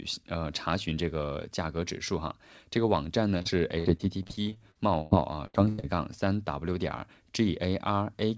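Repeated packet loss (robotic sound) breaks up this speech clip from 3.38 to 5.96 s. Seventeen gaps, the longest 99 ms, are each patched by stretching the last sound, so about a quarter of that span is filled in and the speech turns choppy. The call codec leaves nothing above 8 kHz.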